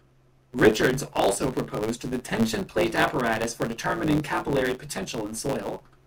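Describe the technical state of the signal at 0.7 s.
At 0.7 s, as throughout the speech, a block size mismatch truncates each block's end. This causes a 109 Hz buzz and playback 1.09 times fast with the timbre kept.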